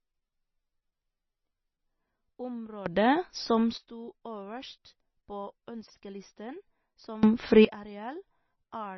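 All the way through, the speech has that watery, swirly texture with smeared consonant attacks and nothing above 6 kHz. That's heavy MP3 compression, likely at a low bitrate of around 22 kbps, where the encoder drops weak frequency lines frame to frame and cuts the treble.

From 2.86 to 3.78 s, and again from 7.23 to 7.65 s, there's a sudden gain jump: the speech and background noise leap up together, by about 16 dB and then about 22 dB, and drop back abruptly. It sounds like a gain setting applied without any ramp.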